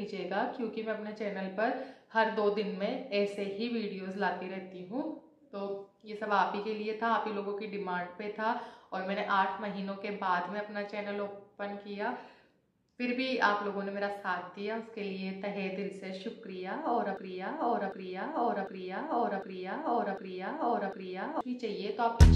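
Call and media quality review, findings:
Broken-record loop, 17.17–21.41 s. A 0.75 s fragment repeats six times, back to back. Likely stalled player or stream resending its last buffer. Intervening audio lost.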